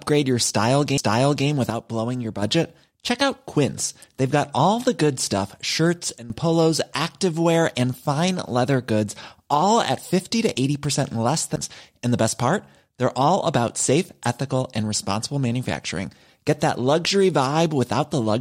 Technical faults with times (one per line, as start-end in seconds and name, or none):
0.97 CD skip
1.70-2.42 sudden gain jump
6.18-6.30 sudden gain jump
11.56 CD skip